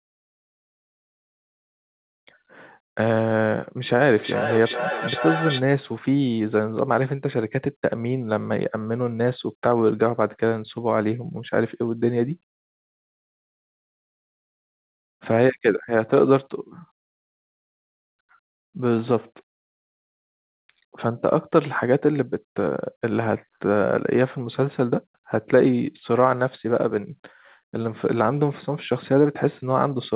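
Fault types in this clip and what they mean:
Feedback echo between two devices: two devices in the same room were joined to one call, so one device's loudspeaker replayed what the other's microphone had sent, and that microphone picked it up again. Neither echo canceller could remove sound played by the other device. From 3.99 to 5.64 s the speech comes back at a steady interval of roughly 400 ms, thinner and ringing, peaking at about 6 dB below the speech, inside a narrowband call sound that stops at 4 kHz.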